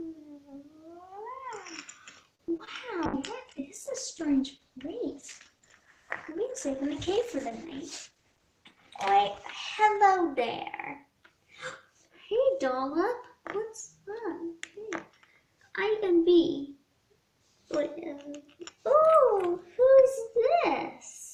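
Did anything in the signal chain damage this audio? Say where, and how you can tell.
Yes. At 2.35 to 2.41 s there's a short stall from a late packet: the jitter buffer ran dry, so the last sound is held about 38 ms, with nothing lost.

Right after, at 2.57 to 2.61 s and 2.65 to 2.69 s, there's short concealed packet loss from the network: two 20 ms holes filled by extrapolated audio, giving brief smears.

From 3.06 to 12.66 s there's a call bitrate drop at the codec, from 64 down to 12 kbps. Bandwidth shrinks from 20 kHz to 12 kHz, so it's duller and rougher for nearly 5 s.

At 8.11 to 8.40 s there's a jitter buffer speed-up: the buffer trimmed about 50 ms of pitch periods, so the audio runs at 115% speed and sounds hurried without a pitch shift.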